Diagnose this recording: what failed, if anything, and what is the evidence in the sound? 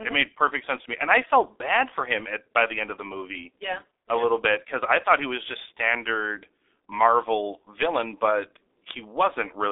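The failure is at the codec stage: the speech passed through G.723.1 coding throughout. The band runs only from 300 Hz to 3.7 kHz, so a spectrogram is blank above that limit, and heavy coding damage leaves hoarse, smeared consonants, consistent with about 6 kbit/s.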